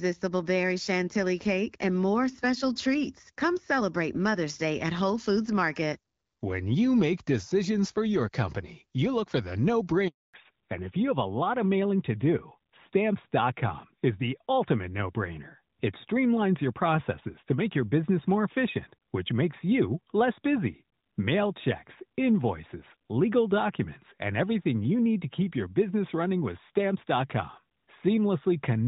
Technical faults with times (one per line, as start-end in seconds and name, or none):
10.08-10.34 handover gap
10.34-28.87 fallback to narrowband